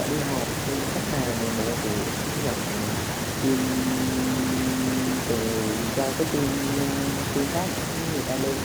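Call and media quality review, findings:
Echo with no canceller, whole clip: faint, thin copy of the speech trailing around a third of a second behind, sitting about 28 dB down. Far end's speaker leaking into its mic, nothing cancelling it, so it rides back over the network.

System hang loop, 3.58 to 5.20 s: a 23.22 ms slice repeats exactly, giving a steady buzz at 43.1 Hz, which fits a 1024-sample buffer. Host or driver froze while the audio hardware kept cycling the same ring buffer.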